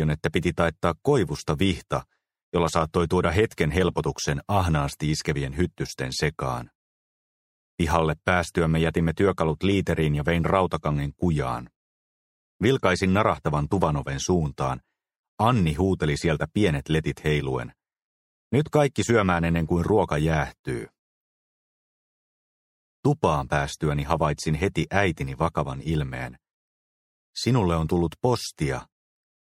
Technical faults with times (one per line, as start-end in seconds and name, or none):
21.76-22.76 robotic sound from repeated short buffers